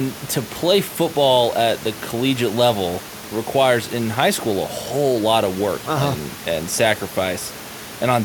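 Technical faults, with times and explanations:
Nothing here points to a technical fault, just the speech with a little background from the room sitting about 19 dB beneath it.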